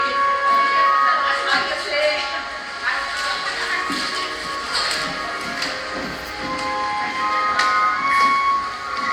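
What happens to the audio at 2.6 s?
Nothing goes wrong at 2.6 s; the audio plays through that moment intact, with no dropout, click, distortion or other fault.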